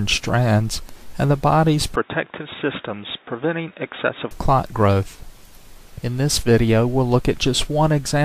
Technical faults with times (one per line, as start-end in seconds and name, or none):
1.96-4.31 input switched to a poorer device